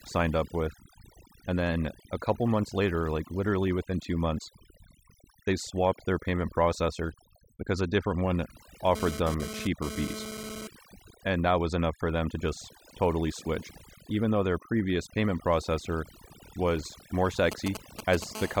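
Overdone noise removal runs through the whole speech clip. The noise reducer was set too aggressively and pulls individual frequency bands down whenever they sit close to its noise estimate. The background collapses into near silence with twinkling specks, while quieter parts of the voice get stripped away.

From 8.95 to 10.67 s, GSM phone buzz appears. It is a hard, raspy 217 Hz tone with a dense stack of harmonics, about 10 dB below the speech. A nearby 2G handset was transmitting in bursts, and the audio circuitry rectified those radio pulses. The buzz comes and goes here, which fits a phone moving data.

GSM signalling bursts follow from 17.52 to 18.24 s. They form a galloping dit-dit-dit of short 217 Hz buzzes, sitting well below the speech. They are the short groups of bursts a phone emits during signalling, picked up and rectified the same way.

GSM phone buzz returns from 18.35 to 18.56 s as a steady 217 Hz rasp, about 12 dB under the speech. 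Its continuity fits the handset having moved into an active call.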